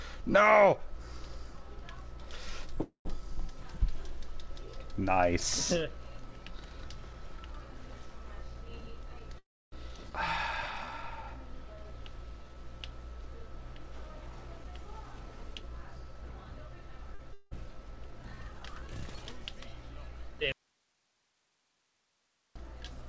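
At 2.82 to 3.07 s and again at 9.38 to 9.74 s there is a call audio freeze. The last sound carries on as a fading buzz, then goes quiet for about 120 ms in the first and about 280 ms in the second, likely because packets were held up and the jitter buffer ran dry. The audio resumes exactly where it stopped, so nothing is lost. It is simply delayed, by 232 ms and 337 ms.

Between 8.47 and 9.31 s a jitter buffer speed-up plays the audio at 107% speed, trimming a few tens of milliseconds in total. From 13.41 to 17.13 s a second speed-up runs at 105% and trims about 0.2 s. The pitch stays the same throughout, so these sound hurried rather than chipmunk-like.

The opposite, a jitter buffer slow-down, stretches 10.86 to 12.55 s to 91% speed by adding 158 ms, and 17.71 to 18.61 s to 92% by adding 78 ms. The pitch again holds steady, while sounds are drawn out.

At 17.15 to 17.21 s a short stall from a late packet holds one sound for an extra 45 ms, heard as a slight buzz. 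Nothing is skipped, which is what separates it from what comes next.

From 17.33 to 17.53 s a long network dropout gives a buzzy continuation lasting 179 ms. When the audio returns, about 240 ms of material is gone, so unlike the freezes it picks up further along.

From 20.52 to 22.56 s an audio dropout to a faint residue cuts the sound off abruptly, leaving only hiss about 45 dB below the signal for roughly 2 s. There is no fade and no buzz, and the audio snaps back at the end.

Throughout, the call path's band limit leaves nothing above 8 kHz.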